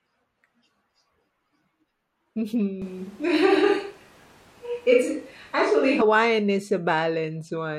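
Speech, where from 2.82 s to 6.02 s, just before "is a", the sound turns abruptly roomy and hollow, likely a switch to a distant microphone. The bass thins out while the level stays roughly the same, and room noise rises to around 30 dB below the speech. On a spectrogram the low band drops away and a noise floor fills the pauses, with sharp edges at both switch points.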